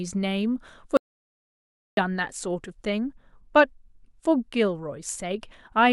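Speech that suffers an audio dropout to silence from 0.97 s to 1.97 s, about a full second gone. It cuts to silence with no room tone, then picks up mid-flow, likely because the input link briefly failed while the recorder kept writing.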